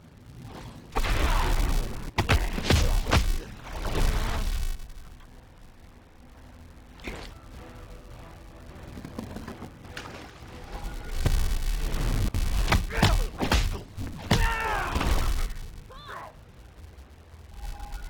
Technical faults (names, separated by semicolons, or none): filter restarted on every block